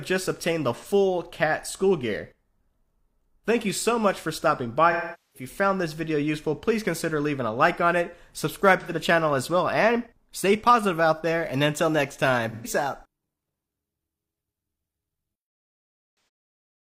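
AAC frame loss with concealment: dropped frames were rebuilt from the last good spectrum, leaving brief smeared, phasey patches at 0.75, 8.8, 12.5 and 16.15 s, and a 0.43 s fade-down-and-back at 4.91 s.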